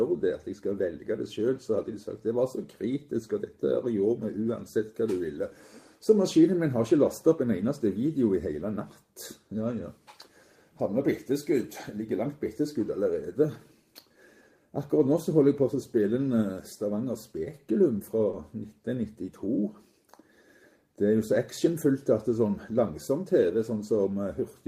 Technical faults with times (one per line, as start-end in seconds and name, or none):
18.31-18.35 short concealed packet loss